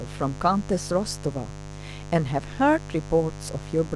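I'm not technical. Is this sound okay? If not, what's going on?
No. Mains buzz runs from start to finish under the speech, a steady, raspy hum that is fairly loud. It comes from the 50 Hz power supply leaking into the recording, often through a dimmer or poorly shielded cable, adding sharp electrical spikes 100 times a second.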